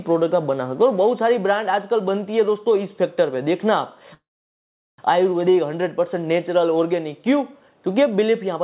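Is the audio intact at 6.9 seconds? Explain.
Yes, the audio is intact at 6.9 seconds, with no dropout, glitch or other fault at that moment, only the narrow call-codec bandwidth that runs throughout, with nothing above 4 kHz.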